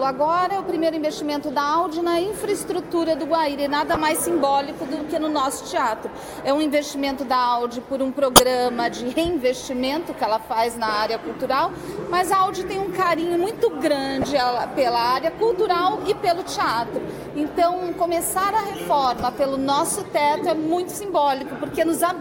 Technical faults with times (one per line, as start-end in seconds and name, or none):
3.91-3.97 corrupt frame decoded
8.36-8.40 corrupt frame decoded
14.21-14.27 corrupt frame decoded
19.17-19.23 corrupt frame decoded